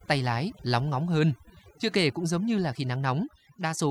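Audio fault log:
Throughout: overdone noise removal. The denoiser was pushed too hard, so any frequency band sitting close to its noise estimate gets pulled way down or switched off. The background drops away and breaks into twinkling, warbling specks, and the quieter parts of the speech get stripped out too.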